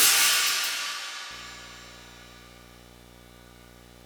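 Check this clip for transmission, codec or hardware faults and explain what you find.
One fault is present. From 1.31 s to the end, a steady 60 Hz buzz with hash above it sits well below the sound: video or display buzz, a screen or video cable coupling its field-rate interference into the audio path.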